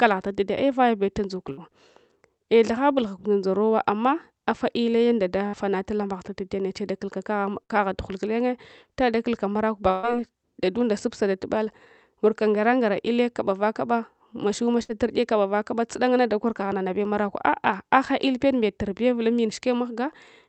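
Bursts of packet loss hit at 1.51, 5.47, 7.63 and 14.83 s (about 90 ms each) and at 9.91 s (150 ms, after "dakulka marakwe", before "dadunda supsadatubal"). The 14.83 s burst comes just before "ur’ye kavaba". Each time, the receiver stretched the last sound into a fading buzz or hiss for about 60 ms (120 ms at 9.91 s), then jumped ahead, skipping the lost audio. On a spectrogram, these show as frozen, smeared harmonics that fade out, then an abrupt change. Throughout the clip, the Opus call path band-limits the audio at 8 kHz.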